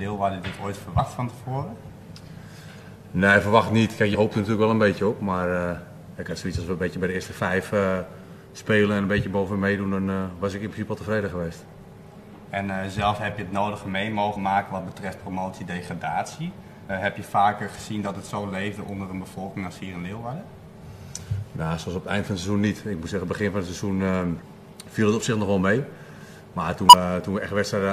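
Compressed frames skipped five times, at 0.98 s, 4.11 to 4.15 s, 16.88 s, 24.38 to 24.42 s and 26.89 to 26.94 s. Whole frames never reach playback, so the sound jumps ahead by about 50, 50, 100, 150 and 100 ms.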